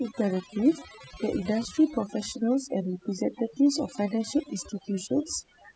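From start to finish the speech carries overdone noise removal: a noise reducer pushed far too hard on a noisy recording. Every frequency band it judged close to the noise floor was cut deeply or muted, taking softer parts of the voice with it. The pauses fall to near silence sprinkled with twinkling specks. A spectrogram shows scattered isolated dots in the gaps and ragged, hollowed harmonics.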